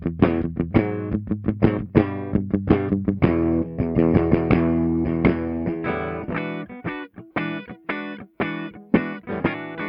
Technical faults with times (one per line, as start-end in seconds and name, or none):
none